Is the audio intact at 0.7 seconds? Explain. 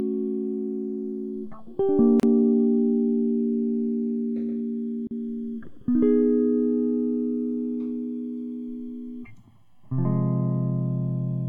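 No. At 0.7 seconds this music is already affected by channels drifting apart, a fault that runs through the whole clip. The two channels seem to come from devices on separate clocks, off by roughly 100 parts per million. The delay between them creeps steadily, reaching around a millisecond by the end. When the channels are summed to mono, the resulting comb notches glide slowly across the spectrum. The result is a slow flanging sweep.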